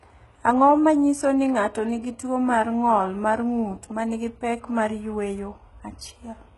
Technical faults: HE-AAC compression

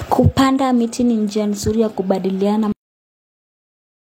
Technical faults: cut-off end

